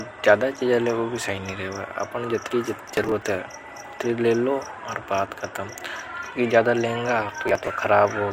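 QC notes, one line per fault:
2.80–3.22 s: processor overload crackle. Short chunks of speech, roughly 10 ms each, drop out in rapid succession, giving gritty tearing until the load eases.
7.43–7.67 s: processor overload crackle. A shorter burst of the same skipped-buffer gaps, around fifteen in quick succession, heard as crackle riding on the speech.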